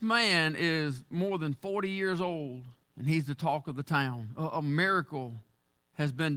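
No technical faults are audible anywhere in the recording.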